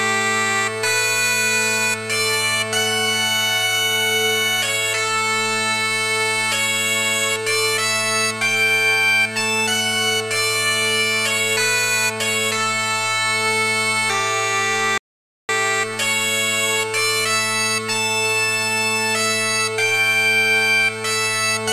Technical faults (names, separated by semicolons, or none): audio dropout to silence